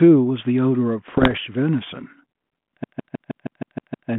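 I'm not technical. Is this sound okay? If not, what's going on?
No. There are two separate problems.

From 1.10 to 1.39 s there are bit errors on an ADPCM link: the sound turns rough, with pops and brief jumps in loudness. A few digital bits were flipped in transit, roughly one in a hundred. This type of phone coding predicts each moment from the one before, so every bad bit throws off what follows and smears for a few milliseconds. That smear is what sets it apart from a clean single click.

From 2.84 to 4.10 s the CD is stuck on one turn: the same sliver of sound, about 0.16 s long, plays over and over, around eight times, with a tiny gap at each restart. A scratch is making the player jump back to the same spot on every spin. The perfectly even, machine-like rhythm of identical repeats is what distinguishes it from a connection simply freezing or dropping out.

The narrow, phone-like tone throughout comes from the telephone coding itself, which here adds only light roughness.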